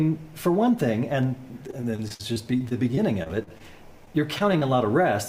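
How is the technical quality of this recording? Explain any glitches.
Two bursts of repeated packet loss (robotic sound) damage the recording, from 1.67 to 3.61 s and again from 4.05 to 4.63 s. Dropouts up to about 50 ms arrive in quick succession, each bridged by extending the preceding audio, so the sound turns choppy, with fragments missing.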